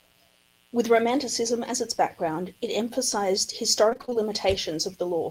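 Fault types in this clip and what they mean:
Mains buzz: a steady, raspy buzz present for the whole speech clip, built from sharp spikes twice per 60 Hz cycle with harmonics reaching into the kilohertz range, sitting about 40 dB below the signal. Unlike a smooth hum, its edge comes from those switching spikes.
Repeated packet loss (robotic sound): from 3.89 to 4.17 s, right after "background it emphasized the", the speech turns choppy as seven short holes, the longest 27 ms, are patched by repeating the preceding sound, leaving about half that stretch concealed. Unlike a single dropout, the gaps recur in quick succession.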